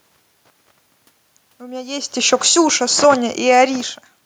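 From 2.67 to 4.09 s, automatic gain falling lowers the level by about 3 dB as the control backs off, so the speech and room noise sink together.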